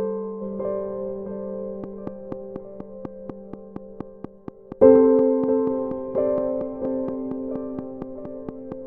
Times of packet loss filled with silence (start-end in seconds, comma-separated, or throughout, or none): none